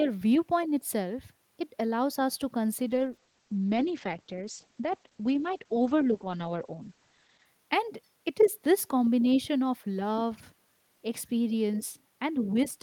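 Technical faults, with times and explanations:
2.88 to 7.51 s, call bitrate drop: the speech turns coarse and muffled as the top end is cut from 20 kHz to 8 kHz, which fits the encoder falling from around 40 to 11 kbps after the call's bandwidth estimate fell. Clarity returns once the bitrate recovers.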